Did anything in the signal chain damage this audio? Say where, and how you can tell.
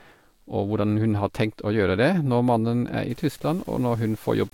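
Yes: from 3.10 s onward, low bit depth without dither, likely 7-bit truncation during sample-format conversion; grit that tracks the signal, about 30 dB down, staircases the waveform.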